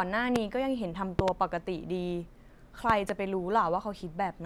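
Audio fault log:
0.36–0.38 s, 1.19–1.30 s, 2.90–3.12 s: loud pops, a single one first, then a quick pair each time, jumping about 20 dB over the speech, which runs on underneath. Sudden voltage spikes, likely from a switch, plug or static, shaped into thumps downstream.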